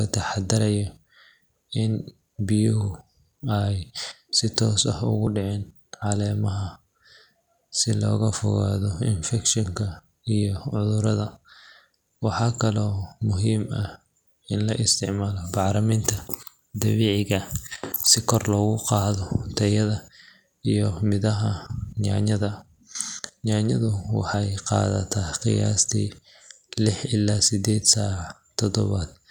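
At 5.27 s and again at 24.34 s the speech jumps, where roughly 20 ms of sound just vanishes and the two sides butt together. That's likely a dropped buffer (overrun), with the capture falling behind and the hardware overwriting samples.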